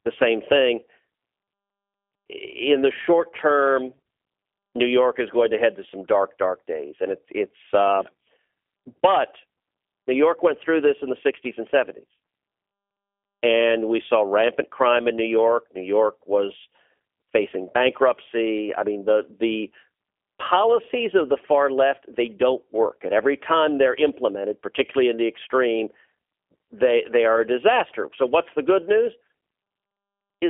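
Throughout, the speech has passed through a G.729 codec, likely at 8 kbit/s, cutting everything above 3.5 kHz and leaving it plainly rough, synthetic and band-limited.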